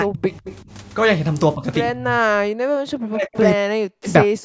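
Right from the start, 0.01 to 0.33 s, the speech sinks by roughly 35 dB, which sounds like speech suppressed in double talk. When both ends talk at once, the echo canceller can't tell the local talker from the loudspeaker echo, so it likely ducks everything. That pattern comes back at 1.55 to 1.64 s, a mild dip of about 10 dB, then at 1.92 to 2.19 s (about 25 dB), 3.04 to 3.37 s (about 35 dB), 3.54 to 4.08 s, the longest at half a second, and 4.24 s to the end. Those last two dig down about 40 dB, so the voice thins or breaks up in chunks.

Between 0.45 and 0.56 s you get an echo leak, a faint copy of the speech trailing by 154 ms at roughly 15 dB under the main voice. Most likely the far end is on a loudspeaker and its canceller didn't scrub everything its microphone caught, so a short scrap got sent back. It's brief and a bit ghostly.

From 2.48 to 2.76 s the room tone drops out hard, about 40 dB. 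That's background gated by the echo canceller: while the loudspeaker plays, the canceller clamps the microphone and lets go a moment later, so the ambience just vanishes and returns. The usual call-mic filtering is there too, with nothing above 8 kHz.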